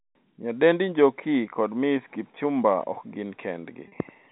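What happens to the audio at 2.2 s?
Nothing goes wrong at 2.2 s: the speech carries on intact through that moment, with only the narrow telephone band of the G.711 coding to be heard.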